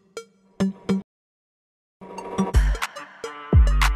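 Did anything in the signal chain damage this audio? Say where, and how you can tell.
Yes, at the playback stage. The sound cuts out mid-flow at 1.02 s and stays silent until 2.01 s, nearly a full second. That's a playback stall, likely the player running out of buffered data or its thread getting blocked.

Right after it resumes, from 2.01 to 2.99 s, the audio runs at twice normal speed but keeps its pitch. That's time-compressed catch-up: the player snips out small slices and cross-fades them to clear the backlog.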